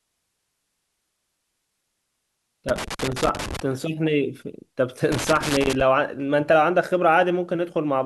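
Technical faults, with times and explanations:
2.69–3.60 s and 5.12–5.81 s, loose connector crackle: two irregular bursts of scratchy crackle, the first lasting about 0.9 s and the second about 0.7 s, break through the speech. A worn or dirty contact is rapidly making and breaking, chopping the signal into fragments.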